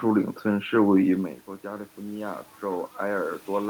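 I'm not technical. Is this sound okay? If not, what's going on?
No. From about 0.47 s to the end, there is automatic gain rising: the recording turned itself up slowly after the sound got quieter. Unlike someone moving near 1 s, the background noise grows along with the speech, a gradual swell.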